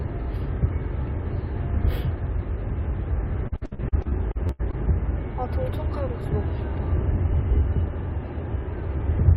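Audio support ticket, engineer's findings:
Choppy, robotic texture from 3.47 to 4.74 s, with pieces of the sound missing. Probable component: network receive path and jitter buffer. Repeated packet loss, with around eleven dropouts in quick succession, the longest about 79 ms. Each hole was patched by extending the preceding audio, about 448 ms in total, roughly a third of the stretch. The repeated stretching is what produces the robotic character.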